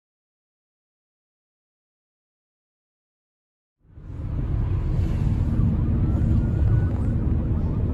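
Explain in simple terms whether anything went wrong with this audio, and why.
Nothing stood out as wrong on listening; the sound simply fades in smoothly from about 4 s up to 4.7 s, the way an editor would bring it in.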